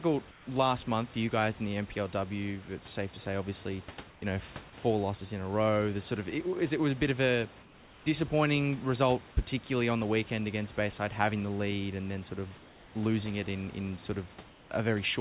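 This speech clip most likely passes through discontinuous transmission, so comfort noise replaces the background at 0.31–0.47, 4.10–4.22 (between "safe to say obviously" and "you know four losses"), 7.62–8.06, 12.58–12.95 and 14.49–14.71 s, where room detail gives way to flat synthetic hiss about 2 to 3 dB quieter.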